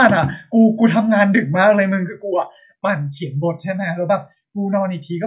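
No technical faults can be heard in this recording.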